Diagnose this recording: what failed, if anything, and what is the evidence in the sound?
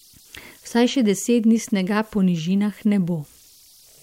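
The converter stage failed. The fault is converter idle tones, present throughout the speech. A whistle sits around 5 kHz. It is clearest in the pauses, where nothing masks it. Under quiet passages it turns into a grainy hiss. The error sits about 34 dB below the signal. The cause is an undithered delta-sigma converter. With a small input it locks into repeating bit patterns. Those patterns produce the tone, and its pitch follows the input offset.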